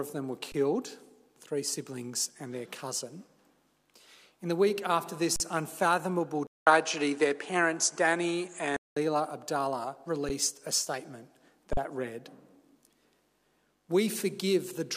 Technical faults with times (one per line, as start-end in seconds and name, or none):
0.52-0.54 underrun with held sample
5.36-5.40 underrun with held sample
6.47-8.96 input switched to a poorer device
10.29 underrun with held sample
11.73-11.77 underrun with held sample